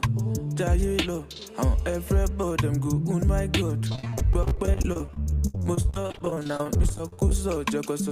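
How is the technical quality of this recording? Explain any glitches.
The recording has one clear fault: repeated packet loss, producing a robotic sound from about 3.88 s to 7.32 s. Dozens of short dropouts follow one another, the longest lasting 69 ms. Each hole is patched by stretching the last received sound, so roughly a third of that stretch is synthetic filler. The audio turns choppy. On a spectrogram the harmonics smear into flat, repeated bands, and the waveform shows copied segments.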